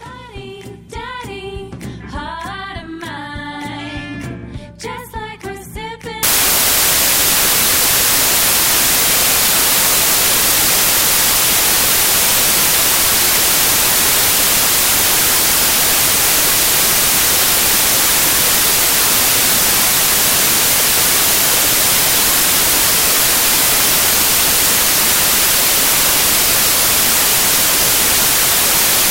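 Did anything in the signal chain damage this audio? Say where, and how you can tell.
Yes. The damage is at the sample-format conversion stage, where samples were built from the wrong bytes. From 6.23 s to the end, loud, harsh broadband noise replaces the sound. The bytes are misassembled, so the noisy low bits become each sample's large part.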